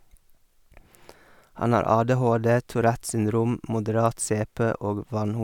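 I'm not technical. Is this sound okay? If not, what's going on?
Yes, nothing stood out as a problem when listening to this recording.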